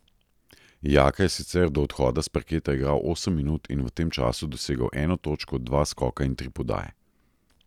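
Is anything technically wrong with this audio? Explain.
No, the speech in this recording comes through with no audible technical faults anywhere in the signal.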